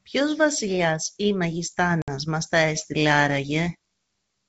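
At 2.02 s the speech drops into a hard-edged gap of silence lasting about 60 ms, ending at 2.09 s, and when it resumes there is some distortion before it settles. This is packet loss on an ADPCM call: a few packets went missing and were filled with silence, and the G.722 decoder's adaptive predictor and step size lost track of the sender's, so the first tens of milliseconds after the gap decode wrongly until the two resynchronise.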